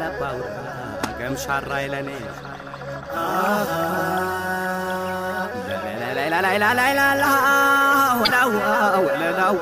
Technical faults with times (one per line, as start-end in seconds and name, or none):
8.22-8.31 damaged data in a compressed stream